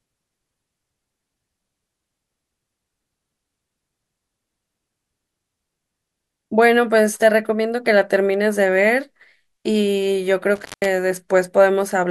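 At 10.55 s the speech suffers an intermittent contact. A loose cable or plug briefly loses its connection. The disturbance runs to about 10.85 s. Within it, the line stays open for roughly 174 ms. The sound drops out abruptly. Crackle marks the edges as the contact breaks and then catches again. During the gap a faint hiss remains. Then the speech returns as suddenly as it went.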